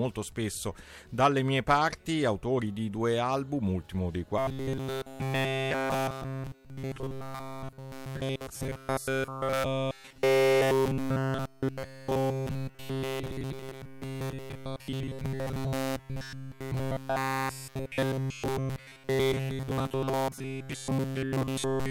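From 4.38 s to the end, the sound collapses into a rigid, metallic buzz fixed at 133 Hz: robotic sound from repeated short buffers. The likely cause is starved input, with essentially every moment filled by looping a roughly 7.5 ms slice while real audio is skipped.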